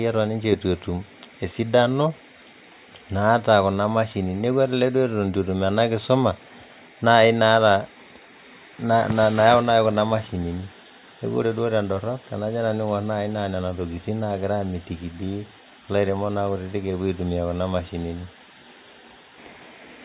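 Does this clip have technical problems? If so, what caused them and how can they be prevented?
No, the speech in this clip shows no audible technical faults, so there is nothing to trace back to a cause or guard against.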